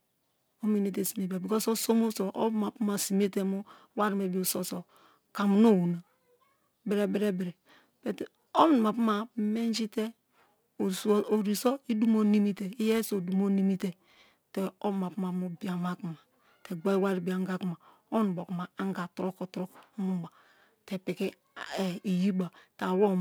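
Speech, with periodic clock jitter running the whole way through. The converter's clock is wobbling at around 2 kHz. Each part of the sound gains copies about 2 kHz above and below it. Higher sounds carry stronger copies. The result is a rough, metallic edge that disappears in the pauses.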